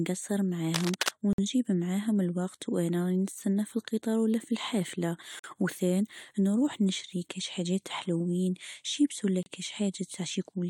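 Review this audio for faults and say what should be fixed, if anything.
Right at the start, from 0.74 to 1.09 s, there's a burst of cable scratch noise: dense, ragged crackle sitting only a few dB under the speech, so it's hard to miss. It sounds like a worn cable, connector or pot being nudged, with the contact resistance jumping around and spraying uneven noise bursts into the signal; that's the likely cause here. Swap or reseat the suspect cable and clean the connectors and controls before the next take.

Then there are three hard-edged dropouts, each a gap between stream segments: at 1.33 s for about 52 ms, at 5.39 s for about 46 ms, and at 9.43 s for about 32 ms. They're short silent holes with abrupt edges, and the speech picks up right where it left off, so nothing is actually missing; it's just pushed later. The roughly four-second spacing fits time stamps drifting at 2-second segment boundaries, with the player filling each shortfall with silence. 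Get the segmenter to write continuous, gapless time stamps across boundaries so the player has nothing to pad.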